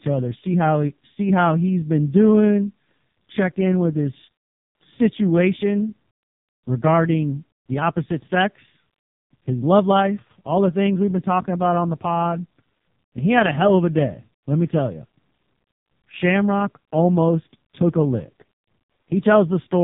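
From start to finish the speech passes through an AMR narrowband mobile codec, and heavily damaged. Nothing above 3.8 kHz survives. The voice sounds buzzy and synthetic, because each 20 ms frame rebuilds it from a vocal-tract model fed by sparse pulses. The degree of damage points to one of the lowest bitrate modes, near 4.75 kbps. A plain telephone-band filter would sound muffled but still natural. Here the timbre itself is rebuilt, and that robotic buzz is what gives the codec away.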